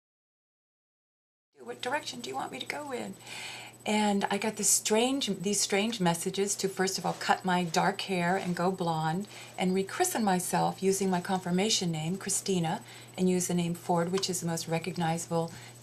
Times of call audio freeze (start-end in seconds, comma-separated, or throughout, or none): none